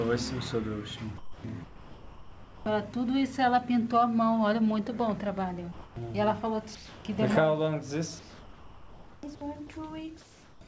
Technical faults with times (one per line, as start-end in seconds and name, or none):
1.18-1.44 sound dropped by the voice detector
1.64-2.66 comfort noise in place of the background
5.72-5.96 comfort noise in place of the background
6.75-7.05 comfort noise in place of the background
8.19-9.23 comfort noise in place of the background
10.21-10.61 comfort noise in place of the background